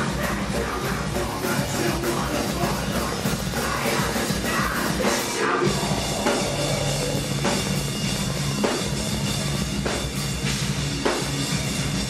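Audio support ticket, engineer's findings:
Train of clicks, 2.5 to 9.63 s. Regular ticking at 14.3 per second, roughly a hundred near-identical pulses, about 10 dB above the sound, audible through gaps too. Likely interference from nearby equipment or a struggling interface injecting periodic pulses.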